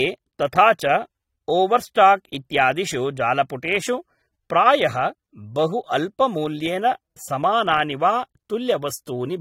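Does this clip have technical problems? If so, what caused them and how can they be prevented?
Yes. Across the whole clip you can hear AAC compression damage, and it's pretty obvious: the speech has that dull, smeared quality, with a warbly, fizzy edge on sustained sounds and sibilants. Nothing comes through above about 16.6 kHz. The likely cause is an AAC-LC encode at a low bitrate, something around 32 kbps, where the encoder starves bands of bits. Next time, keep a lossless master and encode at a higher bitrate.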